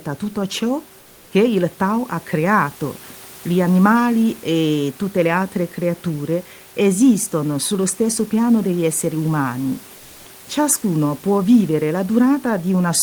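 At 9.97 s, right after "piano degli esseri umani", the room's background gives way for about 0.28 s, until 10.25 s, to comfort noise in place of the background. The background keeps the same level, about 27 dB below the speech, but loses the texture of the real room noise and turns flat and featureless, likely because discontinuous transmission of the Opus DTX kind paused sending and the receiver synthesised filler. Unlike a dropout or noise gate, nothing falls silent.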